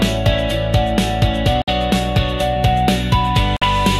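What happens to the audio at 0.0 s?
Nothing goes wrong at 0.0 s; the audio starts cleanly there with no audible fault.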